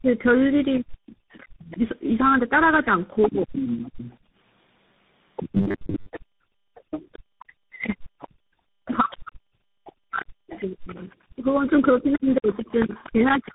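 Across the whole recording the speech carries tandem speech coding: it has passed through four speech codecs in a row, each re-encoding the previous one's damaged output. The result is audibly rougher, muffled and slightly warbly, with a granular edge that fits a CVSD stage in the chain. Nothing remains above about 4 kHz, so sibilants are dull. The low-bass trimming from the call's microphone high-pass is normal.

From 0.0 to 3.82 s the talker suffers speech suppressed in double talk. With both sides apparently active, the echo canceller cannot separate its own talker from the loudspeaker echo and attenuates everything. Roughly 1.5 s in total is affected, with dips reaching something like 40 dB. Syllables fade, lose their top end or drop out in pieces, which is the likely cause of the broken delivery at the start.

From 0.74 s to 13.52 s the other side's voice leaks through. The far end, played on the talker's loudspeaker, is likely not fully cancelled from the microphone and sits around 10 dB below the main speech. 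It comes through as a second voice underneath, persisting almost to the end of the clip.

Background is gated by the echo canceller at 4.21 to 4.33 s and again at 8.28 to 8.34 s. In each case the canceller clamps the microphone while the loudspeaker plays, and the room tone briefly drops, by about 22 dB and about 28 dB respectively, for roughly 100 ms and 70 ms. The sound returns as soon as the canceller releases.

Between 5.55 and 6.11 s there is robotic sound from repeated short buffers. Audio arrives too seldom, and about half of this stretch is filled by looping the last short block while real audio is skipped. The loop imposes a rigid 100 Hz buzz, which points to a 10 ms buffer, and the speech turns metallic while loosely tracking its contour.

From 6.26 s to the end, speech is again suppressed in double talk. Roughly 4 s in total is pulled down, with the deepest dips near 40 dB. Words fade, dull or break up in fragments through the remainder of the clip.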